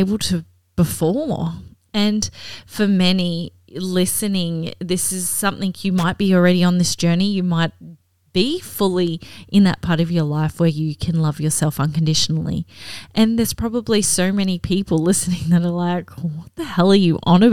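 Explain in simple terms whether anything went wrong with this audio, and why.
A brief loose connector crackle occurs from 5.98 to 6.03 s, just after "this is something you" and before "be already on this". A worn or dirty contact in the cable or plug briefly lost and regained connection, chopping the signal into a short scratchy burst of clicks.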